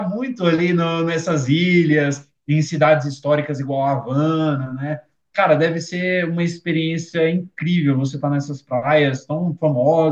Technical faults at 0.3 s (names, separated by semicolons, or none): none